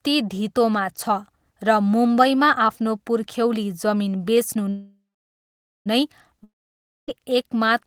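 At 4.69 s the speech stops and a call audio freeze sets in, lasting until 5.88 s. The last sound carries on briefly as a fading buzz, and then about 0.86 s of silence follows. Speech resumes exactly where it left off, so nothing is lost, but everything after is pushed about 1.16 s later. The likely cause is delayed packets draining the jitter buffer. On a spectrogram, a short smeared band decays into a blank column, and the waveform goes flat before the speech returns intact.

From 6.44 s to 7.10 s there is a long network dropout. Again the final sound is stretched into a short, decaying hiss, with roughly 0.58 s of silence after it. This time, when speech returns, about 0.64 s of it has gone, so the audio jumps forward and the timing does not shift. This is likely caused by packets that never arrived. The waveform shows a brief tail dropping to a flat line, and the spectrogram shows an empty stretch followed by an abrupt restart.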